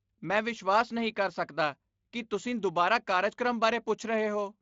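A short speech recording with no technical faults to report. It has been carried through the Speex codec at a fairly generous setting, and only a light coding texture can be heard.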